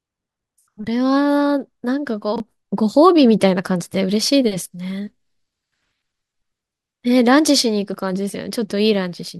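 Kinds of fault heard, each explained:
Chunks out of order: a brief jumbled moment around 2.36 to 2.4 s, where the speech seems to stumble. One 20 ms chunk arrived a chunk late and plays after the one meant to follow it, leaving three hard joins but no lost audio.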